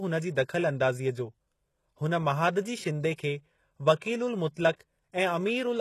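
The whole clip has that HE-AAC compression character, and the damage is plainly audible. The top end stops dead at about 12.3 kHz, and what sits below that cutoff in the treble sounds synthetic rather than recorded. S sounds come out gritty and lispy, with a metallic edge. That's likely spectral band replication at work: the codec keeps only the lower spectrum and fakes the highs by copying lower bands upward, so the harmonics don't line up. The amount of faking fits a very low bitrate, somewhere around 16 kbps.

Then there are three pre-echoes in quick succession, at 3.14 to 3.18 s, 3.96 to 4.02 s and 4.54 to 4.57 s. Each sharp attack gets a short hiss smeared ahead of it, lasting 38 ms, 56 ms and 27 ms respectively, and the onsets sound softened. The codec spread its quantisation noise across a whole transform block, so the noise sized for the loud attack leaked into the quiet moment just before it.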